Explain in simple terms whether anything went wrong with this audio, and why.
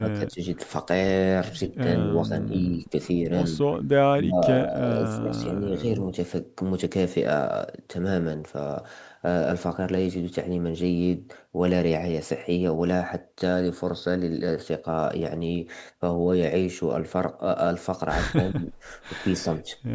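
Yes, the speech keeps getting pushed down: speech suppressed in double talk, likely because the echo canceller turned this side down while both people talked at once. It happens at 0.0–0.41, 1.98–2.33, 3.53–3.92, 4.13–4.44, 4.64–4.83, 4.99–5.83, 18.34–18.84 and 19.2–19.68 s. Unlike a network dropout, the voice dips in uneven pieces rather than vanishing into clean silence.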